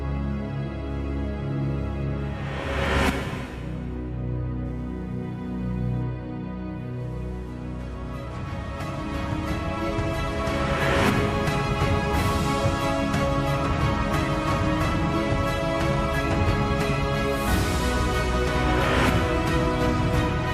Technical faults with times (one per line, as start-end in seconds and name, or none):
0.00-20.53 computer activity noise